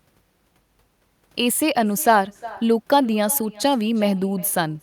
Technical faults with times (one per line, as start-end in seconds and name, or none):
0.00-4.83 echo with no canceller